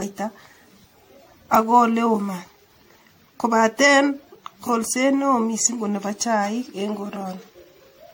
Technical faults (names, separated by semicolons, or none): generation loss